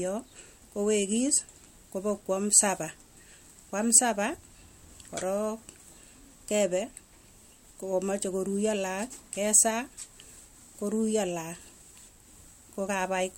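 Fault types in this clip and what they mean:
No audible faults detected.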